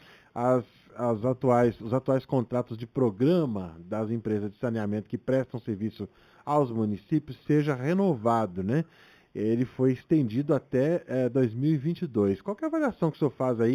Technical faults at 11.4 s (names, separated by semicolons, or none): imaging from linear upsampling